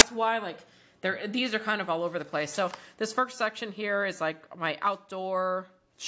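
At 0.0 s there is a very brief burst of very loud white noise with hard edges: file tags played as audio. An embedded cover picture, stored as compressed data, was read as samples, so its near-random bytes come out as static.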